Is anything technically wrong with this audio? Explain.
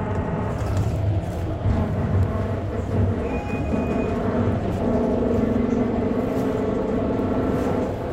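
No, nothing in this recording of sounds shows a technical fault.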